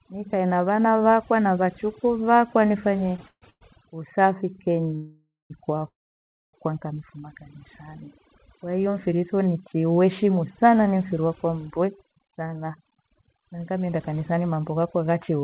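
Throughout the speech, overdone noise removal leaves a lowered background with twinkling specks, as bands near the noise estimate are pulled down along with quiet speech detail. The narrowband sound, with nothing above 4 kHz, fits a G.711 call path.

From 3.12 to 3.63 s, just after "vakwa na vachukuu vakwa", repeated stalls (stutter) occur: four short holds, the longest 140 ms and about 270 ms in total, where the jitter buffer ran dry and the last sound was stretched. Nothing is lost, but the speech drags and stutters.

Two call audio freezes follow, at 4.96 to 5.52 s and 5.88 to 6.55 s, likely from delayed packets emptying the jitter buffer. The first holds 541 ms, fading to silence for about 210 ms. The second holds 654 ms, almost all of it (620 ms) silent. Speech then resumes where it stopped.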